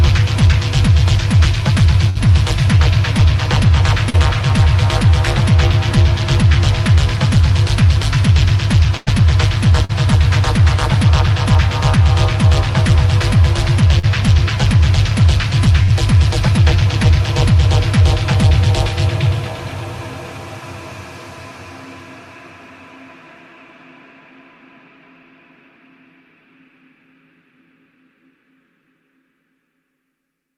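At 2.09 s a held, fading tone replaces the audio for about 56 ms before it resumes at 2.28 s. This is a burst of packet loss. Roughly 60 ms never arrived in time, so the receiver kept extending the last sound and lowered it as the gap went on. Playback then resumed past the gap, with 9 ms added to the timeline.

At 4.10 s a brief smear of about 38 ms covers a 40 ms hole. This is short concealed packet loss, with around 10 ms added where the decoder blended back into the real audio.

The second burst of packet loss, from 8.97 to 9.09 s, is the longest. It is a drawn-out, dying buzz or hiss of 98 ms standing in for 100 ms of lost audio.

Two more short concealed losses follow, at 9.85 to 9.91 s and 13.99 to 14.05 s. Each is a quick wobble of 42 to 44 ms patching a 40 ms gap, synthesised from the preceding pitch or shaped noise.

The final burst of packet loss runs from 15.83 to 15.92 s. A 48 ms fade covers 40 ms of missing audio, and the stream then skips ahead by 10 ms, so a sliver of the signal is gone entirely.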